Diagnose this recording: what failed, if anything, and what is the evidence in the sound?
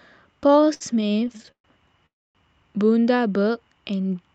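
Network jitter buffer: late packets kept emptying it, causing repeated stalls (stutter) from 0.43 to 1.66 s. About twenty filled gaps, up to 127 ms, make the speech drag.

Network: a call audio freeze at 2.06 to 2.37 s, likely from packets held in transit. The concealment fades to near silence, then speech resumes without loss.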